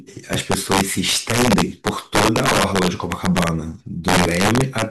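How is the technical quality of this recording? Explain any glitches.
The recording is marred by integer overflow running through the whole speech clip. The signal was driven about 7 dB past the top of the integer range, and instead of being held at the limit, each over-range peak wrapped around to the opposite extreme. Only a small share of samples, around 2 percent, cross that line, so the louder syllables break into sharp, violent cracks. Unlike clipping, which flattens peaks into a dull buzzy distortion, these are full-scale sign flips, far harsher and more sudden.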